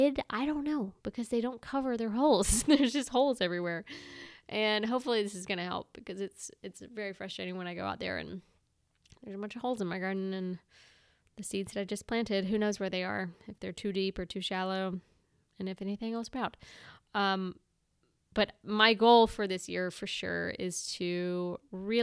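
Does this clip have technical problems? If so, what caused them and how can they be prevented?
No, there's nothing technically wrong to hear in this bit of speech, so there's nothing that needs preventing.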